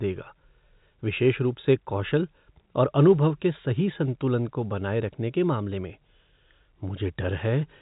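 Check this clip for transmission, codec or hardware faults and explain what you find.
Nothing in this speech stands out as a problem; it just has the narrow, boxy band of an ordinary telephone connection.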